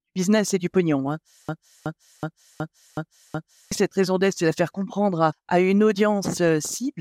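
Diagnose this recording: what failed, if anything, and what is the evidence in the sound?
A system hang loop at the driver or buffer stage: from 1.49 s to 3.72 s, one 0.37 s slice of speech repeats identically six times, a skipping-record repeat at about 2.7 Hz, before normal speech resumes with "cette raison d'être c'est". The period fits a 16384-sample ring buffer that the hardware kept replaying while the host froze, costing about two seconds of audio. Unlike an underrun's silences or packet-loss concealment's brief, decaying repeats, every repetition here is exact.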